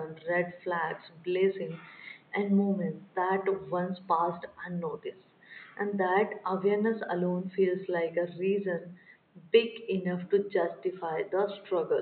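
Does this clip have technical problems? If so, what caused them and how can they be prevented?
No, no technical faults are audible.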